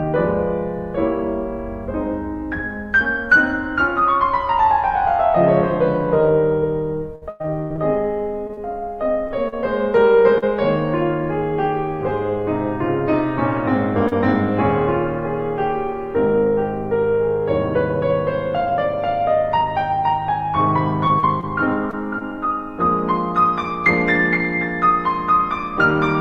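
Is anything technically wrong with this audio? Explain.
Yes, the music suffers from packet loss in the delivery path, in two forms.

Repeated packet loss (robotic sound) occurs from 7.15 to 10.44 s and again from 21.07 to 22.22 s. Audio packets kept arriving too late or not at all, and the receiver bridged each hole by extending the last sound it had. The first stretch has ten gaps totalling about 440 ms, the longest about 104 ms, so roughly an eighth of that span is synthetic fill. The second has five gaps totalling 120 ms, none longer than 34 ms. Because the holes come in quick succession, the music turns choppy, with fragments dropping out.

Short concealed packet loss occurs at 14.08 to 14.13 s. About 40 ms of audio failed to reach the decoder in time, and the receiver covered it with 34 ms of continuation built from the preceding sound before crossfading back into the real signal. 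Because it is a single short gap, it sounds like a brief smear or wobble in the music rather than a sustained breakup.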